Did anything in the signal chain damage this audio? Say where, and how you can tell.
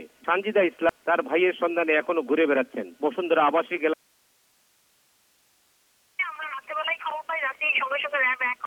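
Yes: likely an upstream signal break while the downstream path stayed live. This causes an audio dropout to a faint residue from 3.94 to 6.19 s, an abrupt cut to hiss around 40 dB down.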